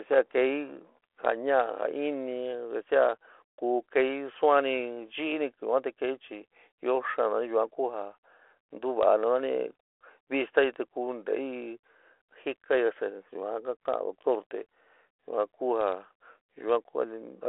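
No technical faults can be heard anywhere in the speech. The G.726 ADPCM path at 32 kbit/s confines it to the telephone band of roughly 300 Hz to 3.4 kHz, with nothing above 3.8 kHz and only a light coding roughness.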